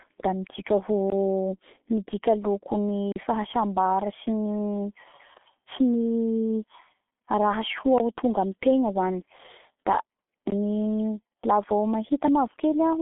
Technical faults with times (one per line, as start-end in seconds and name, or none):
0.00-13.02 G.723.1 codec
1.10-1.12 block of digital silence
3.12-3.16 block of digital silence
7.98 block of digital silence
10.50 block of digital silence